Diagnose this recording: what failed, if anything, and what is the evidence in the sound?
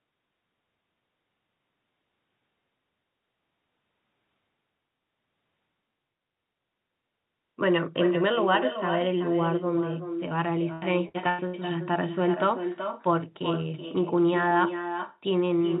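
Echo with no canceller at the far end: its loudspeaker feeds its microphone, so the whole recording carries a copy about 7 dB down, trailing roughly 0.4 s behind.

Repeated packet loss at the network stage, 10.73 to 11.57 s: four gaps up to 92 ms, patched by repeating sound, turn about a third of that span choppy and robotic.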